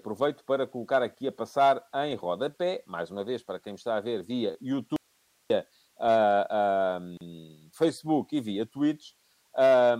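Right after "está a ver via", at 4.96 s, the speech cuts out abruptly and leaves only hiss, roughly 40 dB below the signal, until it snaps back at 5.50 s. That's an audio dropout to a faint residue lasting about 0.54 s. The cause is likely a break in the signal upstream while the path after it stayed live. Then, from 7.17 to 7.21 s, a 37 ms hole opens mid-speech with smeared edges, and the sound resumes right where it stopped. That's a gap at a join of encoded pieces, with the pieces falling every 6 s. Each separately encoded chunk brought its own start-up delay and end padding, and nobody trimmed them before butting the chunks together.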